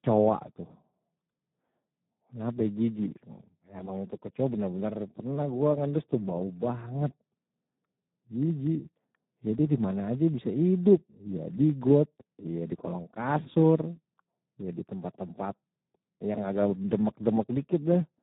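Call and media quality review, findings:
Speech hoarse and noisy, edging robotic, whole clip; band dead above 3.8 kHz. Component: Speex codec at low quality, fits roughly 8 kbps. Mechanism: CELP excitation starved of bits, heavy coding damage, narrowband output.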